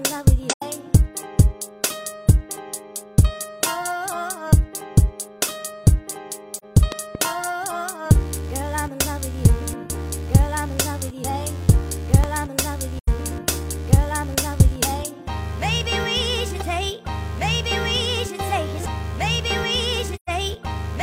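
AAC frame loss with muting at 0.50 to 0.63 s: the decoder lost compressed frames and replaced their spectrum with silence, so the overlapping transform windows fade the sound out and back in. The result is a soft-edged gap of about 85 ms, which fits two missing frames of roughly 43 ms each. The same kind of dropout returns at 6.56 to 6.65 s, lasting about 43 ms, consistent with a single frame.

A loud pop follows at 6.92 to 7.17 s as two sharp transients in quick succession, peaking about 15 dB above the surrounding sound, which carries on underneath. This is likely a voltage step or pulse from a connector, switch, static discharge or driver glitch, shaped by the downstream circuitry. A single pop of similar strength occurs at 12.24 s.

AAC frame muting appears again at 12.99 to 13.08 s, about 85 ms, and at 20.15 to 20.30 s, where the gap grows to about 128 ms, matching three consecutive lost frames.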